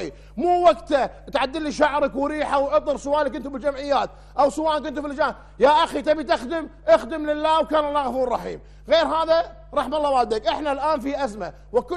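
A steady mains hum at 50 Hz runs through the whole clip, roughly 25 dB under the signal, consistent with a ground loop coupling power-line current in.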